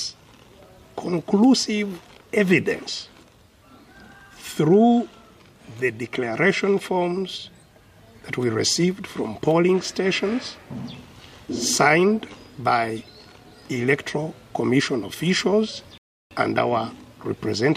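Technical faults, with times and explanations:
15.98 to 16.31 s, rebuffering stall: the sound drops abruptly to silence for about 0.33 s, then picks up again from exactly the point where it broke off, so nothing is skipped but the clip runs that much longer. The player had used up its downloaded audio and had to wait for more data before continuing. On a waveform this is a flat, silent gap with sharp edges on both sides; a spectrogram shows a clean vertical blank band.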